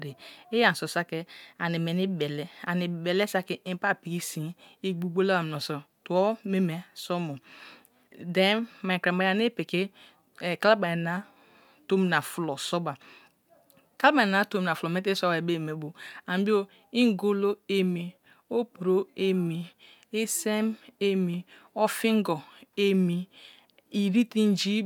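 No technical faults can be heard anywhere in this speech recording.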